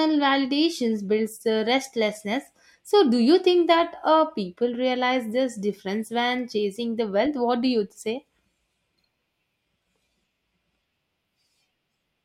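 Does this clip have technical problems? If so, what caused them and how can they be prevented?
No, nothing in this speech recording stood out as a technical problem on listening, so there is nothing here that calls for prevention.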